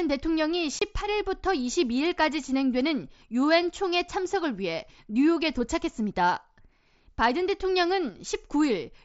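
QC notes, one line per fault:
0.79–0.82 s, unconcealed Bluetooth headset packet loss: about 22.5 ms of voice packets between headset and phone never arrived, a gap that fits three lost mSBC frames, and nothing was patched in, so the speech breaks into a short hole with abrupt edges.
1.01–1.07 s and 8.09–8.16 s, one channel drops out: the level falls suddenly by about 6 dB for roughly 60 to 70 ms each time. The likely cause is one stereo channel going missing, so the mono sum halves whatever both channels shared.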